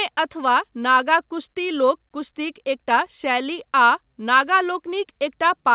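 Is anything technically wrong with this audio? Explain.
No, nothing in this speech recording sounds faulty.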